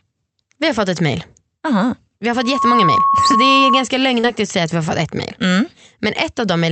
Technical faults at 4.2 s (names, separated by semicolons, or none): short concealed packet loss